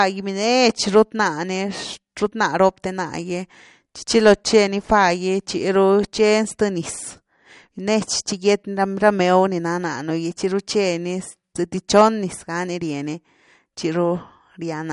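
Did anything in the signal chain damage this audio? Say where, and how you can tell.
Yes, at the codec stage. Throughout, the speech sounds watery and swirly, with nothing above 11.2 kHz. That is likely MP3 compression, fitting roughly 48 kbps, dropping weak frequency lines.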